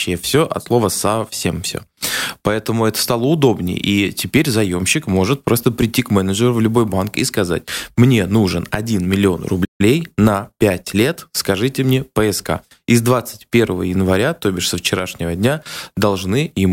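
At 9.64 s the speech cuts out mid-flow. This is a playback stall. The output goes silent for about 148 ms and the sound resumes at 9.81 s. The player likely ran out of buffered data, or its thread was held up, so nothing reached the output. The gap is short but clear. It lands in the middle of the sound rather than at a natural pause, so it reads as a hiccup.

From 9.81 s to 11.27 s comes time-compressed catch-up. The player trims the backlog left by the stall. It drops tiny slices of audio and cross-fades across the joins. The speech runs about 1.1 times faster than normal, and the pitch stays where it was. It sounds slightly rushed. Normal pace returns just before "скажите мне".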